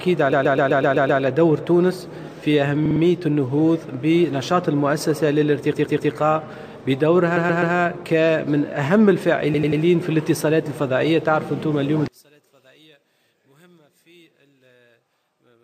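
Repeated frames stutter at 0.31, 2.86, 5.72, 7.36 and 9.53 s. Blocks of 63 to 128 ms replay three to seven times, each lengthening the audio, unlike a dropout, which removes time. From 12.08 s to the end the level falls by about 33 dB and only a faint residue remains, likely one channel inverted cancelling in mono rather than a simple gain drop.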